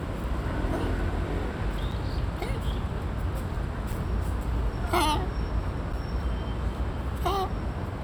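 Three gaps between chunks break the sound at 1.91, 3.92 and 5.93 s, each a 6.5 ms silence arriving every 2 s at each chunk join. Nothing is lost, but each is a brief hard-edged dropout, seen as a flat waveform notch and a thin vertical blank stripe across the spectrogram.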